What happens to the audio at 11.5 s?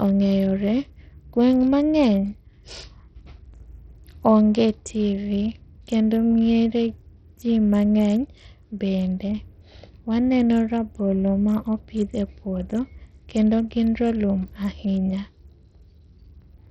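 At 11.5 s the speech carries heavy damage typical of Bluetooth SBC compression, present throughout. Treble flickers and grit rides along, likely from a starved bit pool, suggesting about 64 kbps.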